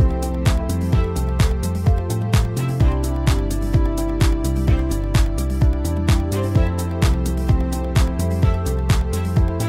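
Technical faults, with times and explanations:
Nothing stood out on listening to this clip.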